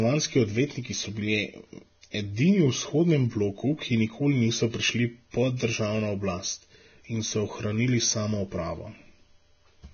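From start to end, the speech is hissy and grainy, with nothing above 6.5 kHz. This is likely heavy Vorbis compression, fitting a low bitrate near 18 kbps. From 2.11 to 2.14 s, a brief hiss precedes an attack. This is pre-echo. Block-wide quantisation noise spreads about 35 ms ahead, softening the onset.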